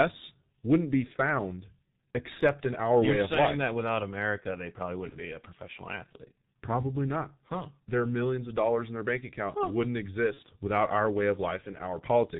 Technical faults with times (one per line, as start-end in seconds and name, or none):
0.00-12.39 G.723.1 codec
5.09-5.16 VoIP packet loss concealed by the speech codec
10.34-10.40 VoIP packet loss concealed by the speech codec